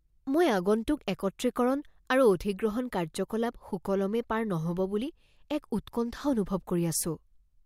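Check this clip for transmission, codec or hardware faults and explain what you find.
Nothing in the speech points to a transmission, codec or hardware fault.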